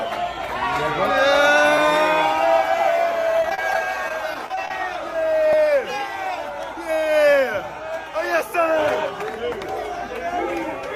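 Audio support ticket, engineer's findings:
Block of digital silence, 1.78 s: output buffer not filled in time, so a 0.73 ms run of samples was zeroed, consistent with a 32-sample underrun. Hard edges in and out produce a single sharp tick.

Block of digital silence, 5.53 s: same underrun mechanism, longer at 2.18 ms. Abrupt cut to zero and back with no fade. Heard as a tick or dip rather than as silence.

Repeated packet loss (robotic sound), 3.40–4.71 s: twelve late or lost packets in quick succession, about 160 ms missing in total, longest hole 31 ms. Concealment stretches the last good audio across each hole, covering roughly 12% of the span. The result is choppy, robotic sound with pieces dropped.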